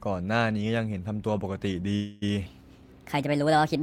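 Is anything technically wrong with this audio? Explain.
Yes, there are two faults in this speech clip.

The first is a call audio freeze from 1.95 to 2.27 s. The likely cause is that packets were delayed in transit and the receiver's jitter buffer ran dry. The receiver stretched the last sound it had into a fading buzz or hiss lasting about 263 ms instead of going silent. When the delayed packets arrived, the speech resumed exactly where it had stopped. Nothing is lost, but a pause is inserted and everything after it runs about a quarter-second late.

The second is a section at the wrong speed, from 2.46 s to the end of the clip. It is likely that this stretch was played back against the wrong clock, running 1.32 times faster than it was recorded. Because speed and pitch move together, the speech abruptly becomes hurried and rises by about five semitones, sounding higher from that point on.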